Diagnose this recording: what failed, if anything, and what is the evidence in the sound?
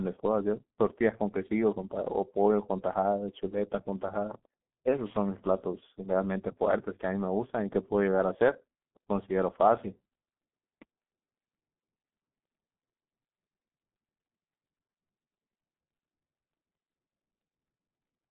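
The failure is at the codec stage: the speech has passed through the G.723.1 codec, with heavy damage throughout the clip. Nothing is audible above 3.8 kHz, and the band sits within a telephone line of roughly 150 Hz to 3.4 kHz, so the speech is muffled and hoarse and its consonants are smeared. The coarseness points to a rate near 6.3 kbit/s. The codec models speech in 30 ms frames and updates that model slowly, blurring fast articulation.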